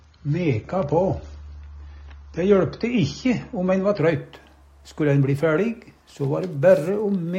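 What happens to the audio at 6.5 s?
Nothing goes wrong at 6.5 s; the audio plays through that moment intact, with no dropout, click or distortion.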